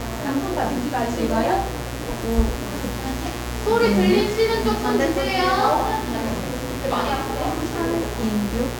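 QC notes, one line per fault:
Throughout: mains buzz, a steady, raspy buzz sitting not far beneath the sound, roughly 10 dB down. Sharp switching spikes from a dimmer, rectifier or unshielded line arrive twice per 60 Hz cycle, spreading harmonics up into the kilohertz range.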